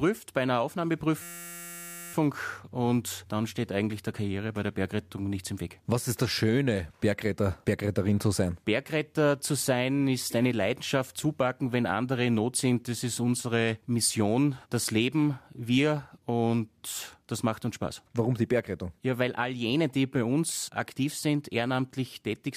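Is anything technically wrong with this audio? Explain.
Yes. From 1.22 to 2.14 s, right before "und dann steht eigentlich", there's a system hang loop. The system froze while a 5.8 ms buffer, likely 256 samples, kept replaying, so you hear a steady 172 Hz buzz.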